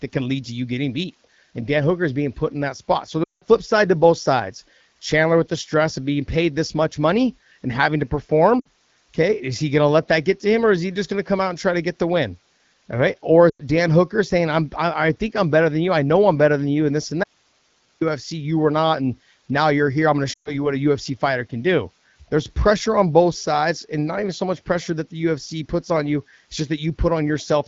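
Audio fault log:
3.24–3.44 s, 8.60–8.67 s, 13.49–13.62 s, 20.33–20.73 s, lost AMR speech frames: the speech briefly warbles, then thins toward silence, worst at 3.24 s (about 180 ms), and recovers roughly. The wideband decoder is repeating its last good pitch and vocal-tract settings with falling gain over runs of failed frames.
17.24–18.01 s, audio dropout to a faint residue: the speech cuts off abruptly for about 0.78 s, leaving only hiss roughly 40 dB below the speech, then snaps back mid-flow. The wanted signal was likely lost while the path after the break stayed live and carried its own noise.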